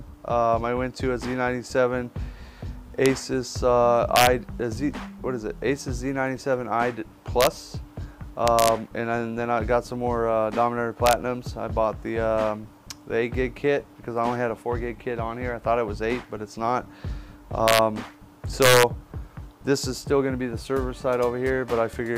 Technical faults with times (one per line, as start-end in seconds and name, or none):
3.06 integer overflow
4.16-4.27 integer overflow
7.41-7.47 integer overflow
8.48-8.68 integer overflow
11.06-11.13 integer overflow
17.68-17.79 integer overflow
18.62-18.83 integer overflow